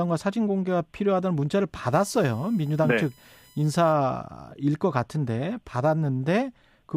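From 1.93 to 3.93 s the speech has USB whine: current drawn in 1 ms bus frames leaks through power or ground, adding a fixed 1 kHz tone and harmonics, strongest at 19 kHz, about 30 dB down. A spectrogram shows horizontal lines at 1 kHz spacing.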